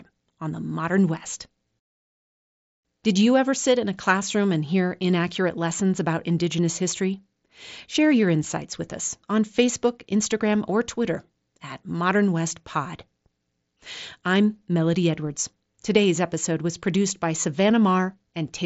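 Speech, with no technical faults to report.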